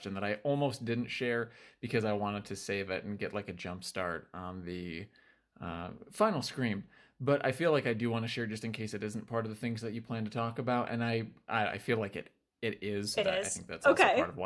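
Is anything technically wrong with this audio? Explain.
No, nothing technically wrong can be heard here.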